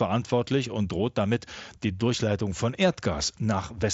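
Nothing goes wrong in this bit of speech; it's simply coming over a Bluetooth headset link using the mSBC codec, with the light grain and band-limited top end that path brings and nothing beyond that to point at.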